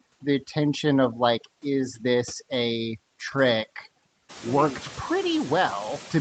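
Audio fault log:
throughout, overdone noise removal: the denoiser is set far too hard, switching off bands near its noise estimate along with quiet parts of the speech. The background drops in the gaps and breaks up into twinkling specks. A spectrogram shows isolated dots in dark gaps and ragged, hollowed harmonics.
throughout, noise suppressor artifacts: steady noise is pulled down by about 12 dB between phrases and rises back under the speech, with room noise climbing about 15 dB near 4.5 s. The waveform floor pumps, and the spectrogram shows blotchy, flickering noise below the 8 kHz cutoff.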